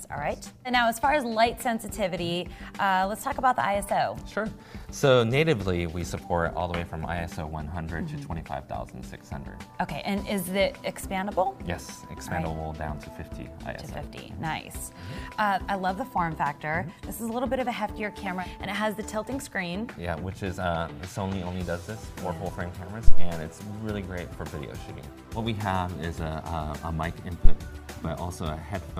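Two phantom power thumps, at 23.08 to 23.31 s and 27.45 to 27.54 s, break into the audio. Each is a deep low-frequency thud peaking near about -1 dBFS and decaying in 52 ms and 20 ms respectively, as a supply switching on a live input pushes a voltage step through the coupling capacitors.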